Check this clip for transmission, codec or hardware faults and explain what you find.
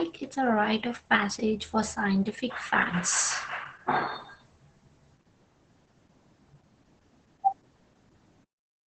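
One codec fault runs through the whole recording: Opus voice compression, heavily applied. It affects the speech from start to finish. Nothing is heard above about 8.7 kHz, which fits Opus running its SILK linear-prediction coder in wideband mode. The crude, hoarse texture suggests a very low rate, around 10 kbps. At that rate the excitation signal is coded coarsely. The speech therefore sounds muffled and rough, with a faintly robotic edge.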